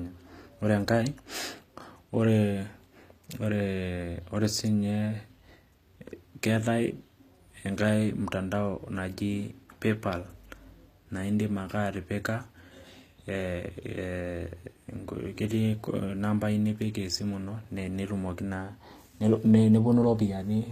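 Speech, with HE-AAC compression damage heard throughout. The treble sounds rebuilt rather than recorded. S sounds turn gritty and metallic, and nothing lies above 14.9 kHz. This is likely spectral band replication at a low bitrate, around 24 kbps.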